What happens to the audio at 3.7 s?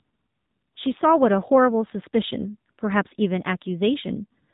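At 3.7 s the speech carries the AMR narrowband mobile codec throughout: nothing above 3.8 kHz survives, and the buzzy, synthetic tone of a low-bitrate vocal-tract model (consistent with about 7.4 kbps) separates it from a simple low-pass filter.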